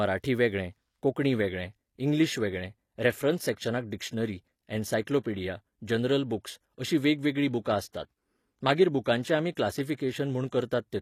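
Adaptive stream at a lower bitrate, from 1.24 s to the end: the connection slowed, so the player switched abruptly, with no gap, to a much leaner encoding. The synthetic treble points to a move from AAC-LC at 96 kbit/s to HE-AAC at 24 kbit/s. Nothing remains above 14.9 kHz.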